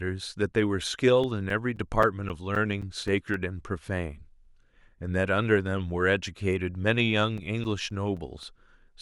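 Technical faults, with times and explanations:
1.24 to 3.34 s, CD scratch ticks: nine short ticks, roughly four a second, each lasting about 10 ms at most. A scratch is wiping out more data than error correction can rebuild once per disc turn, so the player patches or mutes a sliver of the speech every revolution.
7.38 to 8.43 s, CD scratch ticks: five more at the same pace and size.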